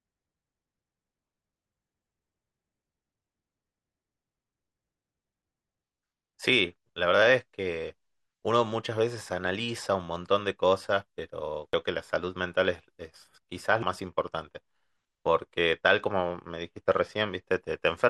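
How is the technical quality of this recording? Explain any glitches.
Two glitches stand out in this speech recording. At 11.73 s and 13.82 s there's a sudden jump, likely a dropped buffer (overrun): roughly 100 ms, then about 150 ms, went missing, and the two sides got spliced straight together.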